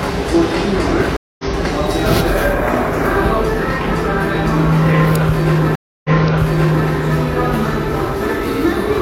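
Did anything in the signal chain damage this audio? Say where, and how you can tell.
Yes. Stream reconnects at the network stage, at 1.16 to 1.44 s and 5.75 to 6.88 s. Silences of 224 and 290 ms show the connection dropping and a fresh decoder restarting mid-stream. The first skips slightly ahead. The second resumes 836 ms earlier, replaying sound already heard.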